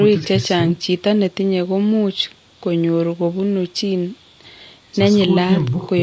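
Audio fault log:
throughout, low-delay AAC compression: speech turns rough and grainy, with noise between harmonics, likely from short-frame AAC-ELD near 32 kbps. That grain sets it apart from the call's clean 8 kHz cutoff.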